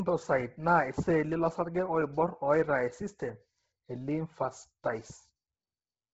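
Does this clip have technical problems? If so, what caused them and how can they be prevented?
Yes. Throughout the speech, the upper band is missing: nothing is present above 7.7 kHz. Below that edge the sound is breathy and grainy. The likely cause is heavy Bluetooth LC3 compression. At a low rate, which fits around 16 kbps, the codec discards much of the upper spectrum and substitutes noise there. The codec likely ran with 10 ms frames. To prevent this, record over a wired link or set the Bluetooth LE Audio link to a higher LC3 bitrate and sample rate.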